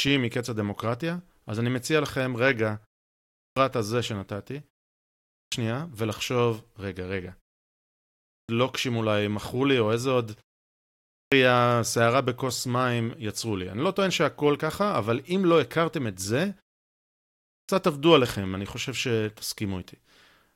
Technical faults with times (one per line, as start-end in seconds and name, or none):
3.13-3.56 clipped start after a pause
5.06-5.52 clipped start after a pause
8.04-8.49 clipped start after a pause
10.84-11.32 clipped start after a pause
17.21-17.69 clipped start after a pause